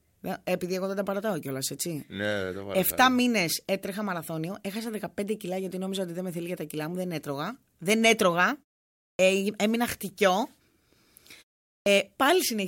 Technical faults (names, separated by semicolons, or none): clipped start after a pause